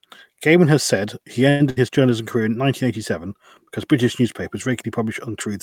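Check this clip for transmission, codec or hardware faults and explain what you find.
Two transmission faults sit close together in this speech clip, both between "has said he" and "his journalism career in".

From 1.49 to 1.62 s the last sound is drawn out and fades for about 105 ms, then speech carries on with nothing skipped. This call audio freeze is likely from packets held up in transit, draining the jitter buffer and adding roughly 105 ms of delay.

From 1.70 to 1.78 s a shorter held, fading tail of about 64 ms appears, and speech resumes with about 60 ms gone. In this burst of packet loss, consecutive packets never arrived in time, so the receiver extended and attenuated the last sound across the gap.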